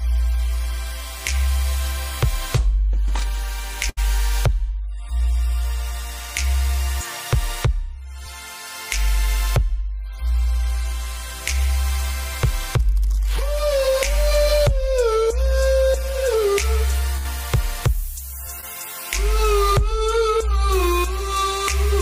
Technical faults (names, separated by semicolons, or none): burst of packet loss; short concealed packet loss